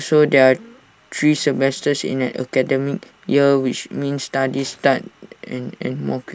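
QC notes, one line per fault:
Nothing stood out on listening to the speech.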